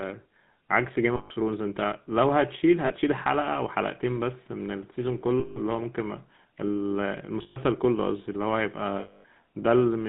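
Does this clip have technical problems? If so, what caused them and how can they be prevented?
Yes. The speech passed through the GSM full-rate codec, which models the voice at 13 kbps with a sparse pulse excitation, within a 150 Hz to 3.7 kHz line. The result is a plainly audible buzzy, gravelly roughness. Using a wideband codec such as AMR-WB or Opus would prevent this.

Lost GSM frames at 1.16 to 1.31 s, 2.86 to 2.91 s, 5.40 to 5.59 s, 7.42 to 7.58 s and 9.00 to 9.25 s were concealed by repeating the last good frame. Each gap becomes a brief metallic ring, and the longest, 240 ms, fits about twelve missing frames. A cleaner radio link or error-protected transmission would prevent these dropouts.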